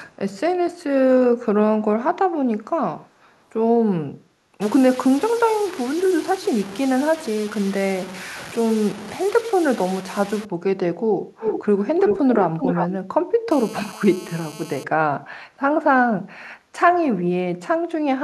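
Speech runs through this clip with three kinds of fault. An echo leak appears as a faint delayed copy of the voice about 439 ms behind it at 0.09–0.16 s and 3.22–3.41 s, then much stronger, almost as loud as the speech and 379 ms late, at 11.38–11.83 s and 12.05–12.87 s. This is likely a far-end echo canceller letting speaker pickup through, and it sounds like a true repeat rather than room reverberation. From 4.61 to 10.45 s the sound turns gritty and grainy, which fits low bit depth without dither, likely truncation to about 5 bits. The distortion is heavy, and it tracks the voice and collapses in quiet moments instead of sitting there as steady hiss. At 13.51–14.84 s a hard, raspy GSM phone buzz at about 217 Hz from a phone in a call holds steady about 20 dB below the speech. It is harsher and higher than smooth 50 or 60 Hz mains hum.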